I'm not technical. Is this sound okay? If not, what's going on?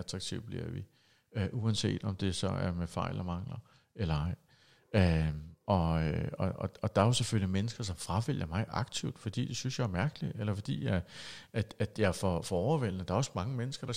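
No. From about 1.4 to 4.2 s, just after "bliver vi", the speech turns faintly dull, losing a little sparkle at the very top. This is channel delay (comb filtering): one channel runs a tiny fraction of a millisecond late, and mixing the two cancels the highest frequencies.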